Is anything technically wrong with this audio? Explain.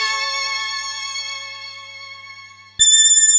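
Yes. Throughout, the audio has a wrong sample rate fault: it plays exactly twice as fast and a full octave (12 semitones) high, which fits 8 kHz material played at 16 kHz without conversion. Unlike a pitch-shift fault, timing and pitch rise together, so everything is hurried as well as raised.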